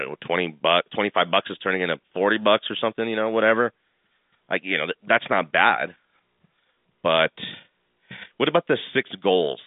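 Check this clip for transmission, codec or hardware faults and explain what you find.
No transmission, codec or hardware faults are audible here.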